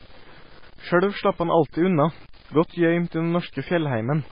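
From start to finish, the speech carries grainy distortion that tracks the signal. Quiet passages turn gritty and the softest sounds sputter. This is likely low bit depth without dither. The rounding error sits around 30 dB below the speech, which fits truncation to about 7 bits.

Throughout, there is also nothing above 5 kHz, so the treble is dull. The sound is watery and swirly, with metallic chirps on s sounds and smeared attacks. Heavy MP3 compression is the likely cause, at a bitrate that points to about 16 kbps.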